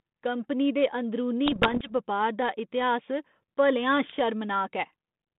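From 1.46 to 1.90 s, between "कंपनी दे अंदरूनी" and "बपार दा", and again from 4.06 to 4.19 s, bit errors on an ADPCM link cause pops, rough bursts and brief level jumps. Each flipped bit upsets the decoder's step size and predictor, so the roughness rings on rather than leaving the gaps of packet loss.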